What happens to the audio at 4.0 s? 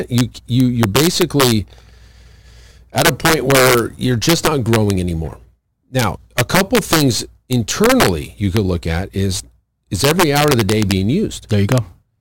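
At 4.0 s the speech carries integer overflow, as it does for the whole clip. The signal is driven about 4 dB past the integer ceiling. Instead of being held at the limit, each sample that goes over wraps around to the opposite extreme. Under one percent of samples cross that line, so the damage sits on the loudest peaks. Each one snaps across the full range. The result is harsh, violent cracks, far sharper than ordinary clipping.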